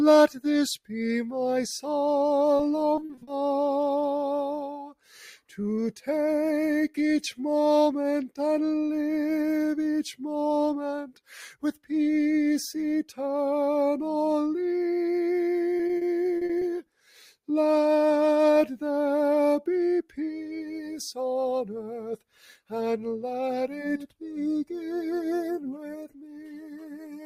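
A speech-tuned noise suppressor runs on this sound throughout. It treats sustained tones and tails as noise, so level pumps by around 10 dB while attacks pass.

From 2.57 to 3.29 s, repeated packet loss produces choppy, robotic sound. Gaps up to 40 ms are patched by extending prior audio, and about a quarter of the span is concealed.

The suppressor then cuts sound, sinking held material and clipping decays, at 4.62–5.09 s, 11.03–11.29 s, 16.82–17.49 s, 20.03–21.0 s, 22.17–22.73 s, 23.68–24.47 s, 24.8–25.09 s and 25.58 s to the end. Drops reach about 12 dB, and about 8 dB at 24.8 s.

Between these, at 15.77–16.63 s, repeated packet loss returns with the same gapped texture. About a fifth of that stretch is filled in.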